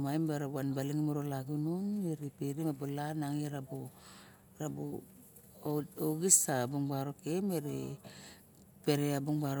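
There are no technical faults to describe in this speech recording.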